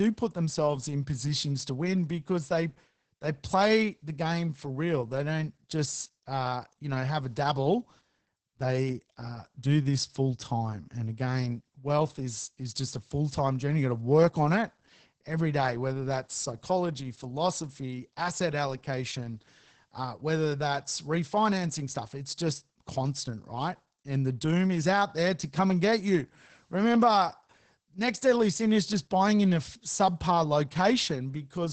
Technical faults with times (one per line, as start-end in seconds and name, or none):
0.00-31.73 Opus voice compression